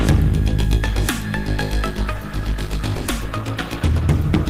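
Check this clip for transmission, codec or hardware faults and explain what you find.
One fault is present. From 1.9 s to the end, an adaptive stream at a lower bitrate: the connection dropped to a cheaper encoding, consistent with a step from roughly 64 to 16 kbit/s Opus, so the quality changes abruptly and artefacts rise, without any gap.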